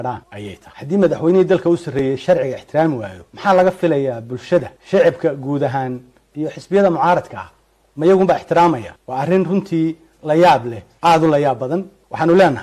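Nothing stood out as a technical problem on listening to this audio.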